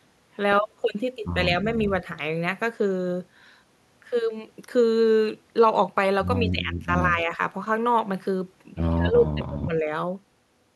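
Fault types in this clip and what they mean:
Speech suppressed in double talk: The speech level sinks in three places. From 6.41 to 6.93 s it falls by about 15 dB. From 7.14 to 7.40 s there is a milder dip of about 5 dB. From 8.96 to 9.88 s it drops hardest, by about 20 dB. The likely cause is an echo canceller meeting both sides talking at once. It cannot tell the near talker from loudspeaker echo, so it turns everything down.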